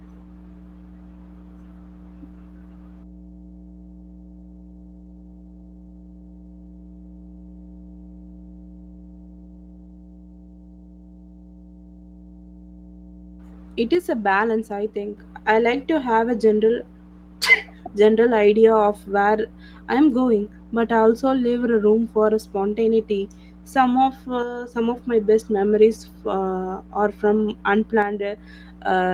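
A steady mains hum at 60 Hz runs under the whole recording, sitting roughly 25 dB below the speech. It is the classic sign of a ground loop or a transformer's field leaking into the signal path, heard as a constant low drone that does not follow the talker. Because it is present the entire time, it fills the pauses between phrases and gives the quiet passages a low droning floor.

The first of three one-channel dropouts runs from 13.95 to 15.18 s, ending just before "I like to have". Shorter ones follow at 24.43 to 24.74 s and 28.02 to 28.37 s. Each time the level falls abruptly by 6 dB and then snaps back, which likely comes from one stereo channel cutting out before the mono fold-down and halving the material common to both sides. The light hybrid Opus coding at 24 kbps works normally throughout.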